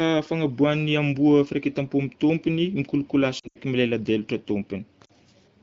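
Radio errors corrupted AMR speech frames, so the wideband decoder patched them with faded repeats. These lost AMR speech frames cause a brief dropout and warble from 3.39 to 3.59 s, just after "tompony mikolokolasy", and a shorter dip at 5.05 to 5.11 s.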